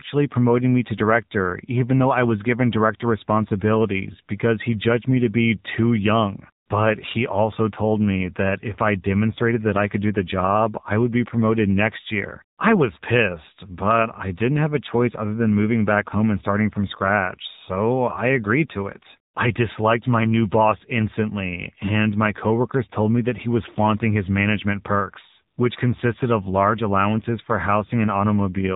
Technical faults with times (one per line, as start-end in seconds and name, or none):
0.00-28.75 AMR narrowband mobile codec